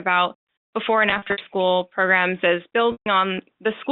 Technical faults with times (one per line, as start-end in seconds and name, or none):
1.10-1.38 packet loss with pitch repetition
2.92-3.06 packet loss with pitch repetition